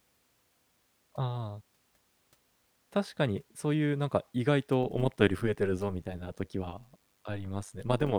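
From 4.83 s, frames rejoin with overlaps that don't sum evenly, so overlap-add ripple swings speech about 11 dB near 100 Hz: a metallic buzz with added tones.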